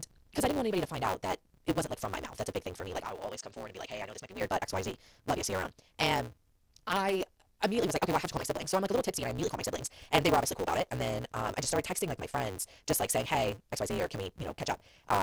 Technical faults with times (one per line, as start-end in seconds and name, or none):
0.00-15.23 block size mismatch (truncated)
1.93 overlap between stream segments
3.05-4.41 input switched to a poorer device
8.33 overlap between stream segments
9.38 overlap between stream segments
14.71 overlap between stream segments